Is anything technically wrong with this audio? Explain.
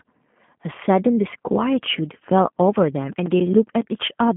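Yes. Throughout, the G.729 codec narrows the speech to about 150 Hz to 3.4 kHz, nothing above 3.6 kHz; the audible roughness points to 8 kbit/s model-based coding rather than simple band-limiting.

From 2.99 to 4.09 s, CD scratch ticks: nine evenly spaced clicks, each up to about 10 ms, repeating with the disc's rotation rather than randomly like codec frame loss.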